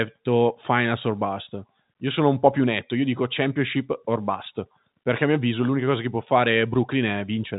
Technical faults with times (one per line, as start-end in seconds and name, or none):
none